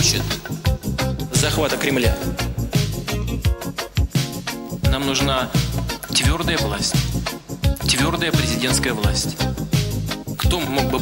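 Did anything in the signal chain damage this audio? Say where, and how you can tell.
No, nothing in the signal chain has left an audible mark on this audio, and the signal is free of faults at every stage a listener can assess.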